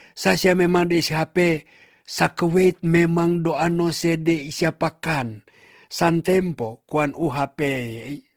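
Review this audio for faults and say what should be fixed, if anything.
Throughout the speech, the sound has a grainy, rough, noisy texture, plainly audible but without the swirling gaps of MP3. It is likely Opus compression in its music mode, filling bands with folded or noise content, consistent with about 16 kbps while keeping full bandwidth. Encode from the original at a higher Opus bitrate, or deliver lossless, to avoid it.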